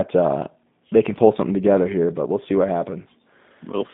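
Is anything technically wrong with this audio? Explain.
Yes. Throughout the speech, it carries G.729 codec damage, plainly audible. The signal sits in a telephone band of about 150 Hz to 3.7 kHz, which fits a low-rate speech coder at 8 kbit/s. G.729 resynthesizes each 10 ms frame from a vocal tract model, a pitch predictor and a few coded pulses, so the sound turns rough and synthetic. That modelled, buzzy texture separates it from plain band-limiting, which only dulls the sound.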